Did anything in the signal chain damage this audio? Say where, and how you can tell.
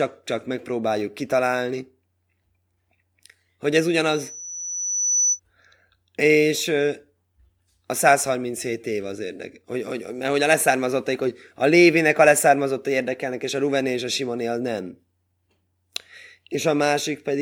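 Yes: loudspeaker feedback squeal in the acoustic/analogue loop, 4.12–5.40 s after "hogy ez". A 6 kHz tone swells over about a second to roughly speech level, a brightening horizontal spectrogram line.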